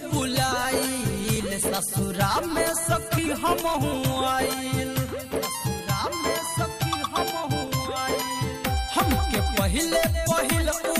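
At 1.36 s, 3.18 s and 7.68 s the sound jumps forward, each time losing only a few milliseconds. This is most likely a dropped buffer (overrun): the samples were overwritten before the program read them, so the audio on either side is spliced together. Unlike a dropout, no silent gap is left. The sound simply skips ahead.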